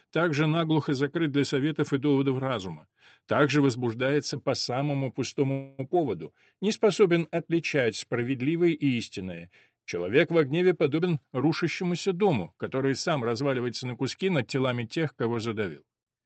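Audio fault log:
5.51 to 5.81 s, call audio freeze: the sound stops moving forward and the last moment is drawn out as a fading buzz for about 272 ms, with no drop to silence. The likely cause is delayed packets draining the jitter buffer, so the receiver stretched what it had. Nothing is lost; the audio then resumes where it left off, a little later. On a spectrogram the final spectral frame smears horizontally and dims. The waveform shows a repeating, decaying stretch.
10.98 to 14.68 s, jitter buffer speed-up: the audio runs about 7 percent fast at unchanged pitch and sounds hurried. The buffer held too much, so the receiver cut short pitch-period slices again and again, roughly 0.3 s in all, to catch up. On a spectrogram the harmonic spacing stays the same while events sit closer together in time, below the 8 kHz ceiling of the Opus call path. The waveform shows cycles dropped at tiny splice points.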